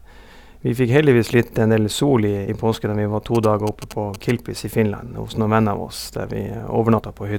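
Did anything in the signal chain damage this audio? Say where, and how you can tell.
Yes. At 2.47 s and again at 6.98 s the speech jumps forward. These are compressed frames skipped at the codec or storage stage. Whole frames of 21.3 ms never reached the output, because they were missing or the decoder rejected them. The first jump loses roughly four frames, about a tenth of a second. The second loses roughly two, around 40 ms.

From 3.35 to 4.31 s a galloping dit-dit-dit of short buzzes at 217 Hz sits about 15 dB below the speech. These are GSM signalling bursts picked up in the analogue wiring. A nearby 2G phone was sending short groups of radio bursts, as it does when setting up a call or text. The audio circuit rectified that RF into this buzzing pattern.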